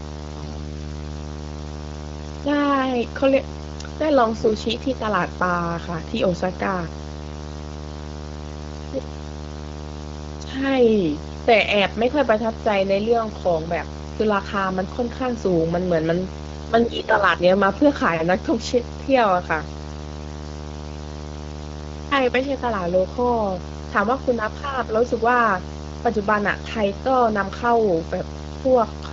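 Throughout the recording a video or display buzz sits under the speech, a steady 75 Hz drone with hash above it, at about 10 dB below the speech level. A monitor or video cable is coupling its field-rate energy into the audio line. On a spectrogram it shows as a fixed horizontal line at 75 Hz with evenly spaced harmonics stacked above it, running unbroken through pauses. The waveform never settles to silence between phrases.

From 4.38 to 4.51 s, and again from 16.83 to 17.17 s, AMR bit errors turn the speech hoarse, scratchy and gargly while its pitch and loudness stay roughly in place. The spans fit about six and about fifteen 20 ms frames. Across those frames something like one bit in fifteen of the weaker-protected data was flipped. The excitation pulses are misplaced and the fine gain and spectral values drift. On a spectrogram the harmonic striations smear into ragged noise for those stretches, and the waveform's periodic cycles turn irregular and jagged. 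The AMR-WB wideband coding around them, at 12.65 kbit/s, keeps the surrounding speech clear up to about 6.4 kHz.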